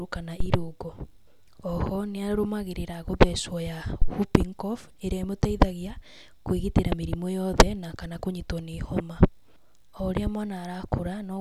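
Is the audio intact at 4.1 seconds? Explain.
No. A phantom power thump runs from 4.02 to 4.11 s, just before "whooping cough": supply voltage switched on or off on a live input sent a step through the coupling capacitors, heard as a deep thump peaking at about -8 dBFS and decaying within 21 ms.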